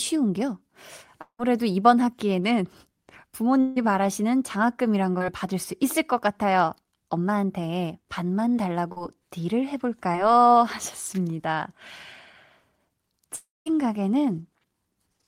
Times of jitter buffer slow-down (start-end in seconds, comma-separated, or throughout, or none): none